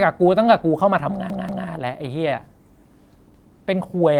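New audio failed to arrive in time twice, so the device replayed its last buffer. The speech stutters as a 186 ms piece, which fits an 8192-sample buffer, plays three times from 1.3 to 1.67 s and twice from 3.34 to 3.53 s, with hard joins and nothing seemingly skipped.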